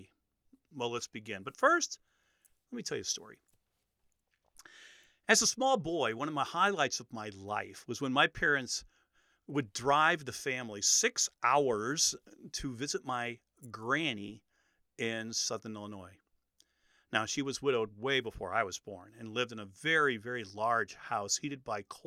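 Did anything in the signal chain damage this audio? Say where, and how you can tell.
No, no stage in the chain from capture to playback has left an audible mark on this speech recording. Nowhere does the signal carry the kind of disturbance that a failing stage would leave behind.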